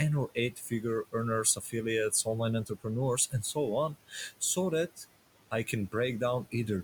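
All the way through, the background noise ducks away in the gaps and swells back up under the talker. These are noise suppressor artifacts: the processor pulls down any band it judges to be steady noise, by about 18 dB, deciding afresh every frame, so bands switch in and out. The room noise it is working on sits about 18 dB below the speech.

Three short stretches sound swallowed. From 0.28 to 0.84 s, fragments adding up to roughly a fifth of a second go faint, dipping as much as about 14 dB. From 1.55 to 1.75 s something similar happens, with a loss of about 12 dB. From 2.65 to 2.86 s, just before "and so on so", the dip reaches about 16 dB. In each case this is speech cut by the noise suppressor: parts of the speech were mistaken for background and lowered along with it.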